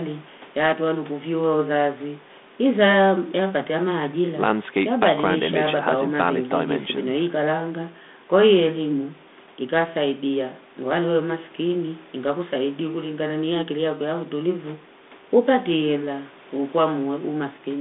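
A speech recording with no technical faults to report.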